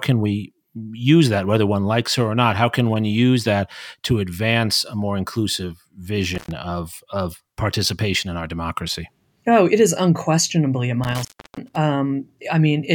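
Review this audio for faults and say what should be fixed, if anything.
Two crackly breaks where the speech drops out, at 6.35 to 6.51 s after "advance a more inclusive" (about 0.11 s open) and 11.04 to 11.76 s after "it is unquestionably a" (about 0.33 s open). This is an intermittent contact: a loose cable or plug briefly opening the signal path. Reseat or replace the suspect cable and connectors, and secure them against movement during recording.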